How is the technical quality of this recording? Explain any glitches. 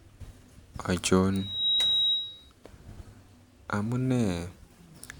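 The recording has a clear fault: a loudspeaker feedback squeal in the speech. From about 1.32 s to 2.51 s a single whistling tone near 3.8 kHz creeps in and takes roughly 0.4 s to swell to full strength, ending up a few dB louder than the speech. The mic was picking up the speaker it was feeding, and at that frequency the loop gain went above one, so the tone kept reinforcing itself until it stopped.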